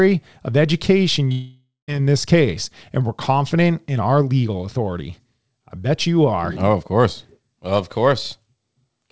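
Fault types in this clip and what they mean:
Long network dropout: from 1.32 to 1.90 s the sound smears into a fading buzz, then about 0.16 s of near-silence, likely because packets stopped arriving and the receiver stretched the last audio; roughly 0.56 s is lost before playback resumes, band-limited at 8 kHz.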